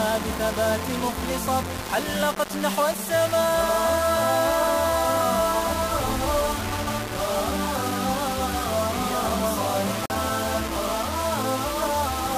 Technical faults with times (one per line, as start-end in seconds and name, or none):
0.00-12.38 low bit depth without dither
10.06-10.12 Bluetooth stall